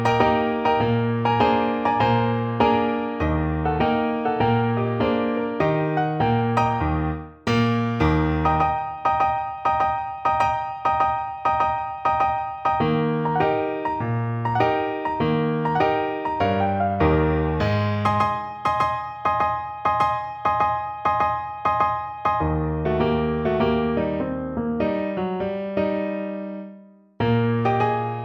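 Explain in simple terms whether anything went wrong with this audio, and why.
Yes. Throughout, there is imaging from linear upsampling: the rate was raised from 24 kHz to 48 kHz by joining samples with straight lines. The top end sounds dulled, with a faint mirrored copy between 12 kHz and 24 kHz. Unlike ordinary filtering, that copy adds a light metallic shimmer.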